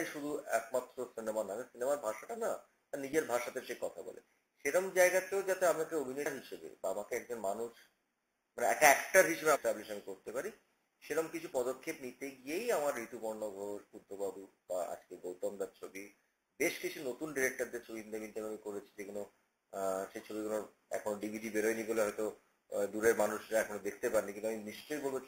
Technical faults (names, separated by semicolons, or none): compressed frames skipped; dropped samples